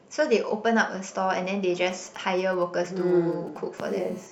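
A nearby 2G phone exchanging short signalling transmissions between 1.91 and 3.58 s has its radio pulses rectified by the audio circuitry. These GSM signalling bursts come through as a galloping dit-dit-dit of brief 217 Hz buzzes, sitting well beneath the speech.

From 3.78 to 4.27 s the phone is transmitting continuously as in a call, bursting 217 times a second, and the circuit demodulates that too. This GSM phone buzz is a steady, hard, raspy 217 Hz tone rich in harmonics, about 25 dB below the speech.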